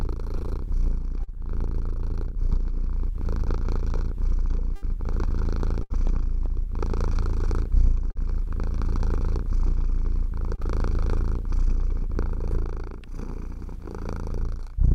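A brief smear or wobble at 1.23 to 1.30 s is short concealed packet loss. About 40 ms of audio arrived too late for the decoder, which bridged the hole by extending the preceding sound before blending back in.

From 4.75 to 5.97 s the sound turns choppy, with fragments dropping out. This is repeated packet loss. Three separate gaps, the longest 71 ms, were each patched by continuing the prior sound, covering about 12% of that stretch.

The same short smear recurs at 8.11 to 8.18 s and 10.55 to 10.61 s. Each is another concealed loss of roughly 40 ms.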